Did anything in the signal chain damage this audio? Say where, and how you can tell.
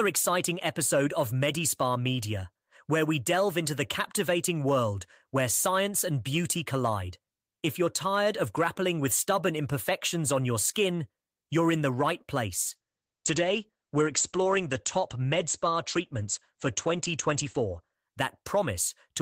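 Yes, a call bitrate drop in the codec stage, from 12.7 s to about 18.0 s, just after "you're in the right". The speech turns muffled and rough, and its high end is cut from roughly 20 kHz down to 8 kHz, which fits the encoder falling from about 32 kbps to 12 kbps. A falling bandwidth estimate made Opus code more coarsely and drop the top band until the rate recovered.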